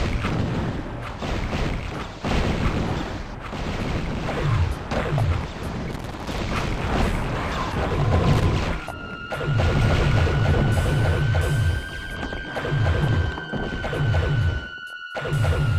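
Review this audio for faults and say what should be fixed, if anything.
Loose connector crackle occurs from 5.91 to 6.38 s and again from 8.33 to 8.46 s: irregular scratchy bursts where a worn or dirty contact repeatedly breaks and remakes the signal path. Clean or replace the connector and secure the cable against movement.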